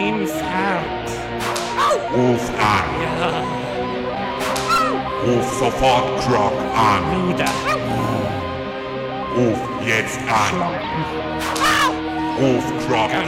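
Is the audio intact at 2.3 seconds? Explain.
Yes, at 2.3 seconds the audio plays through cleanly, with no dropout, click, distortion or other fault to be heard at that point.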